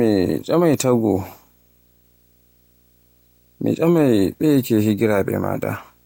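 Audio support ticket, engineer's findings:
Low buzz at 59.94 Hz with hash above, plus faint 15.7 kHz whine, throughout, roughly 40 dB down. Video or display buzz: screen or video cable coupling field and line rates into audio path.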